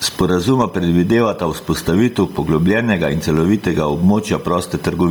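From start to finish a thin, fixed-pitch whine sits under the speech, built on a 1 kHz tone with its strongest component high up at 19 kHz, about 35 dB below the speech. This is USB whine. The bus polls devices in 1 ms frames, and that regular current draw leaks into the audio through the power or ground wiring. The result is a steady tone at 1 kHz and its multiples rather than random hiss.

Also across the whole clip, the level breathes, a swing of around 15 dB. Loud and quiet passages end up pressed close together, and the speech sounds squashed. This is gain pumping. The likely cause is input gain set far too high for the microphone, with a fast limiter or compressor pulling the level down on every peak and letting it rise again in the gaps. The room noise sits some 36 dB below the speech.

Throughout, the speech has a breathy, grainy edge, with the upper frequencies replaced by a hissy texture instead of real detail. 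Nothing is present above 20.2 kHz. This is heavy Bluetooth LC3 compression, likely from the LE Audio transform codec working in 10 ms frames at a low bitrate, which fits something around 32 kbps. At that rate the encoder discards much of the upper spectrum and fills the gap with noise, which causes that coarse, sandy sheen.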